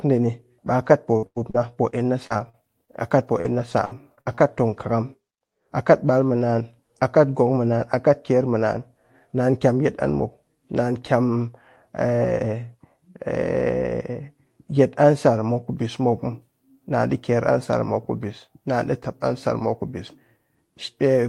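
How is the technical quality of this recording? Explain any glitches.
The recording has one clear glitch near the start. Repeated packet loss (robotic sound) runs from 0.67 to 4.39 s. Packets kept going missing or arriving late, and each hole, the longest about 94 ms, was patched by stretching the preceding sound, roughly a third of a second in all. The result is choppy speech with fragments dropped. The call path's Opus coding caps the high end near 12 kHz.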